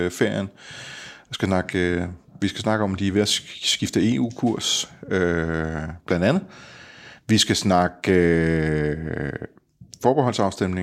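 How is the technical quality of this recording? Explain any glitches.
No glitches turn up anywhere in this speech recording. There are no dropouts, clicks or distortion to explain.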